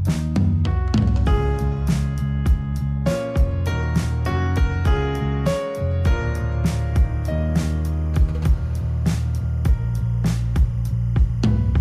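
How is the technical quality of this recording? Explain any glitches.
There's one problem: timecode bleed from 6.78 s right to the end. Linear timecode is leaking in from an adjacent track or cable, its square wave flipping between roughly 1 and 2 kHz at a 25-frame rate, making a faint chirpy warble sitting about 40 dB under the sound.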